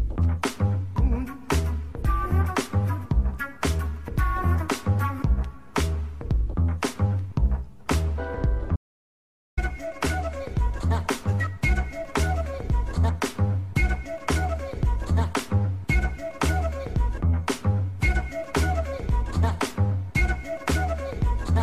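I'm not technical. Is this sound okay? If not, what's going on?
No. From 8.76 to 9.57 seconds the sound cuts out completely. This is an audio dropout to silence. For about 0.8 seconds there is dead quiet, not even background hiss. The input was likely lost briefly, and whatever played then is gone.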